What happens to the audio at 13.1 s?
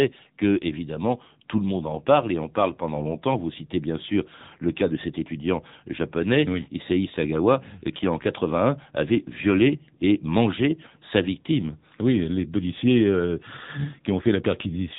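At 13.1 s the speech is still passing through the AMR narrowband mobile codec, as it does for the whole clip. The audio is cut to a narrowband signal and rebuilt from a vocal-tract model with sparse pulse excitation, so nothing above 3.8 kHz survives and the voice sounds plainly buzzy and synthetic, which fits one of AMR-NB's lower modes near 8 kbps.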